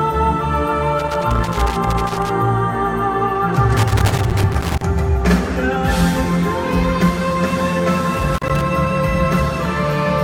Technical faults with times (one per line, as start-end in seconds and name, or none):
0.99-2.29 loose connector crackle
3.77-4.82 loose connector crackle
8.14-8.62 loose connector crackle